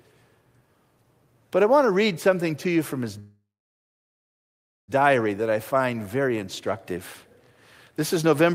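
A call audio freeze runs from 3.19 to 4.91 s, right after "to you from his". The speech halts and the last sound is stretched into a brief fading buzz, then about 1.44 s of silence. Packets were likely held up in transit, emptying the jitter buffer. When they arrive, the speech resumes exactly where it stopped with nothing lost, so everything afterwards plays about 1.69 s later than it otherwise would.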